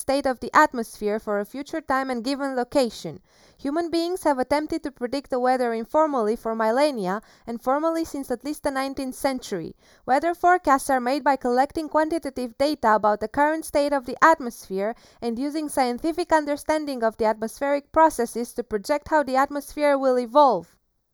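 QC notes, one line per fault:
Throughout, channel delay (comb filtering): the speech sounds hollow and phasey, with a dulled, scooped upper midrange that never changes over the clip. One channel arrives a fraction of a millisecond late, roughly 0.2 ms, so when the two are summed to mono, energy common to both cancels at fixed, evenly spaced frequencies. The first notch sits around 3 kHz, right where speech clarity lives.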